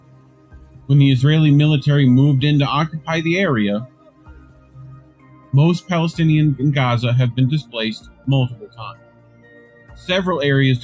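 A noise suppressor built for speech is applied to music or sounds throughout. It treats sustained, steady content as noise, so the level swings by around 10 dB. Onsets pass while held parts sink, giving an audible pumping and thinning.

The sound is cut by the noise suppressor in four stretches: 0 to 0.89 s, 3.86 to 5.53 s, 8.02 to 8.27 s, and 8.54 to 10.08 s. Each dips by about 10 to 11 dB, so steady or decaying material drops away and tails are clipped short. The band-limiting to 8 kHz comes from the call microphone processing and is expected.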